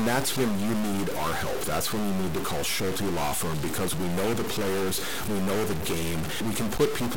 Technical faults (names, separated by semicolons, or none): stuck bit